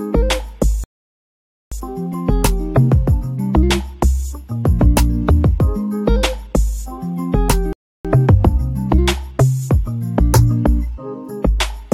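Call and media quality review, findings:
Rebuffering stall, 0.84–1.72 s: playback drops to silence, then resumes at the exact point it stopped. About 0.88 s added, no content lost. Player buffer underrun; download fell behind playback.

Rebuffering stall, 7.73–8.05 s: same signature, shorter. Clean cut to silence, seamless resume, about 0.32 s added. Client buffer drained again before the next segment arrived.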